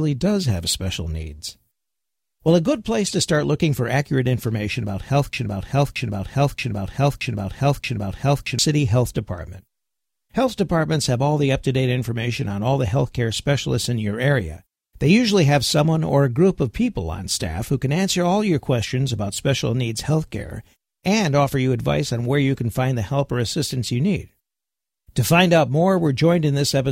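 At 3.06 to 3.10 s, a corrupt frame decoded produces a brief chirpy burst: damaged bits in roughly two compressed frames were decoded anyway, scattering energy into wrong frequencies. On a spectrogram it appears as a narrow vertical smear of misplaced energy about 40 ms wide.

From 5.33 to 8.59 s, a broken-record loop repeats the same 0.63 s fragment of speech five times, back to back, and the speech that belonged there is missing. A stalled stream or player likely kept resending its last buffer. The waveform shows identical repeating blocks, and the spectrogram shows the same pattern tiled across the span.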